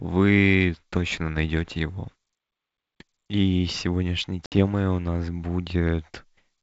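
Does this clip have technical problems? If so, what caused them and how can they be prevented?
Yes. Packet loss on an ADPCM call cuts a 60 ms hole from 4.46 to 4.54 s. Several packets went missing. The decoder's predictor then resumes out of step, and the speech comes back slightly distorted. Forward error correction or packet loss concealment would prevent this.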